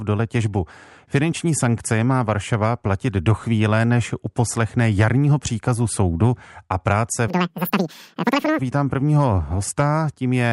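From 7.28 to 8.59 s the speech runs at double speed and an octave higher: a wrong sample rate, which fits 24 kHz material played back unconverted at 48 kHz.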